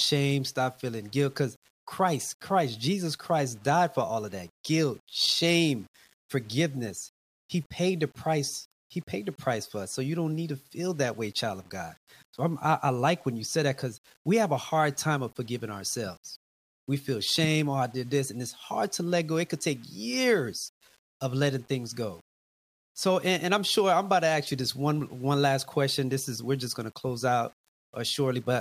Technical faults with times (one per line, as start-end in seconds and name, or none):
none